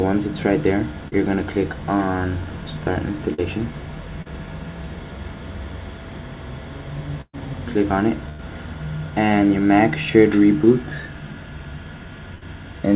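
Brief smears land at 1.08 to 1.14 s, 3.34 to 3.40 s and 4.22 to 4.27 s. Each is a short concealed packet loss. About 40 ms of audio failed to reach the decoder in time, and the receiver filled the hole for roughly 35 to 45 ms by extending the preceding sound, then crossfaded back into the real signal. Each instant wobbles, and the band-limited character of the call path holds throughout, with nothing above 4 kHz, which fits G.711 mu-law at 64 kbps.

Longer dropouts follow at 7.21 to 7.35 s, 8.29 to 8.41 s and 12.35 to 12.43 s, where the sound freezes into a held buzz or fading hiss before jumping ahead. These are bursts of packet loss, with 120 ms, 100 ms and 60 ms of audio missing in turn. The receiver stretched the last sound while turning it down. In the first burst, the concealment runs out entirely and leaves about 50 ms of silence before playback resumes.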